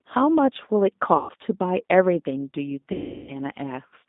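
Throughout, the speech carries G.729 codec damage: a band of roughly 200 Hz to 3.7 kHz, a plainly rough, synthetic texture, consistent with an 8 kbit/s G.729A coder rebuilding speech from a vocal tract filter, pitch predictor and sparse pulses.

VoIP packet loss concealed by the speech codec occurs at 1.17–1.32 s, covering 120 ms of lost audio, and again at 2.92–3.36 s, covering 360 ms. The decoder extends its last pitch and filter with falling gain, so the speech smears into a fading buzzy tone or coloured noise. After each gap the voice stays weak or distorted for tens of milliseconds or more.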